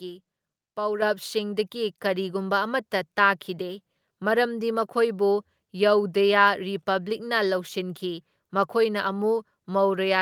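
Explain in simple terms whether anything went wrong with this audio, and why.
At 1.02 s the whole recording suddenly gets louder in one jump, the speaker and the room behind them together, and stays at that new level. That is a microphone volume stepped up: the calling software judged the microphone too quiet and turned its input volume up all at once.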